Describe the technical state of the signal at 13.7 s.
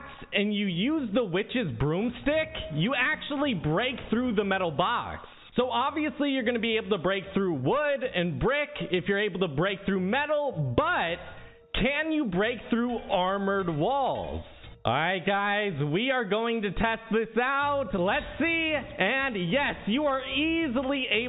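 At 13.7 s the signal is intact, with no dropout, distortion, clipping or other audible fault.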